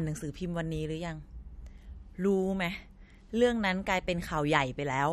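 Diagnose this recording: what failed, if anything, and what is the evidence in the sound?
The codec stage is the likely culprit: MP3 compression damage runs through the whole speech clip and is plainly audible. Nothing is present above 13.2 kHz, a hard treble cut that fits a low bitrate around 48 kbps. Starved of bits, the encoder drops weak frequency lines, which flicker in and out frame by frame, so sibilants turn watery and swirly. That swirl separates it from a simple low-pass filter or a narrowband line, which cut the top cleanly.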